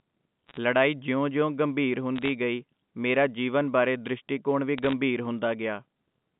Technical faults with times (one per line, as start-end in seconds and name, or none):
0.47-0.57 bit errors on a digital phone line
2.16-2.29 bit errors on a digital phone line
4.78-4.93 bit errors on a digital phone line